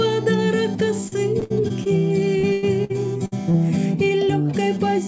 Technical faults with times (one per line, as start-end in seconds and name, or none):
1.08-1.87 repeated packet loss (robotic sound)
2.39-3.56 repeated packet loss (robotic sound)